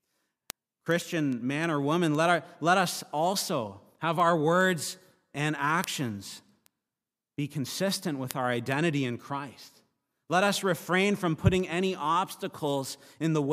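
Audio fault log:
0.50–13.24 s: word clock ticks, roughly thirty sharp clicks of uneven strength about every 0.4 s, as an unlocked receiving clock drifts around 50 ppm against the sender and drops or repeats single samples; each shows as a thin full-height vertical line on the spectrogram and a one-sample step in the waveform.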